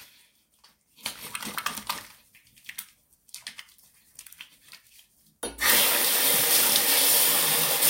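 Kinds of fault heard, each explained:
No kinds of fault are heard in this audio.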